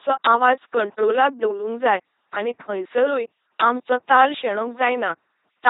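From the very start to the end of the clip, the speech has been squeezed through an LPC-10 vocoder at 2.4 kbit/s, and the damage is heavy. Each stretch gets rebuilt from a short all-pole filter fed either a buzzy pulse train or plain noise, so the voice turns mechanical and robotic, with stray buzz or hiss wherever the voiced/unvoiced call goes wrong. There's also nothing above about 3.9 kHz, which leaves everything dull and boxed-in.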